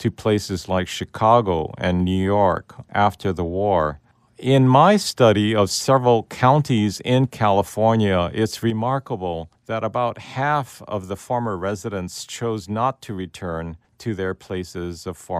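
One channel drops out from 8.70 s to the end of the clip: the level falls abruptly by about 6 dB there. This is likely a lost stereo channel, leaving the mono sum built from just one remaining side.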